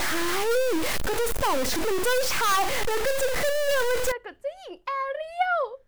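A speech recording carries a stuck bit from the start to 4.12 s. Through that stretch the sound turns harsh and buzzy. Pauses do not fall silent. They fill with a gritty noise that tracks the sign of the quiet signal. The likely cause is one data bit held at a fixed value by a broken line or converter. Its weight sits around -20 dBFS, so about half the samples jump by that large step.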